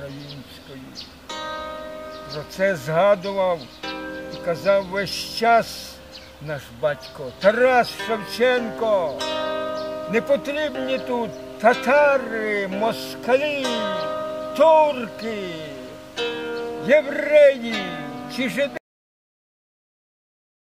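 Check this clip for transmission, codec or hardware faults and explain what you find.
One fault is present: a cut-off end at 18.77 s. The sound stops mid-event and drops straight to digital silence, which holds for the remaining 1.96 s. The final buffers were never written or played back, so the recording was truncated rather than allowed to finish. Unlike a fade-out or a natural ending, there is no decay or tail. Unlike a mid-stream dropout, nothing resumes after the gap.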